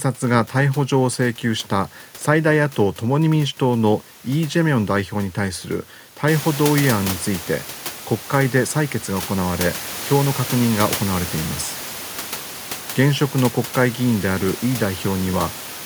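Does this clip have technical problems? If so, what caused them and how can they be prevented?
No, this clip has no technical problems.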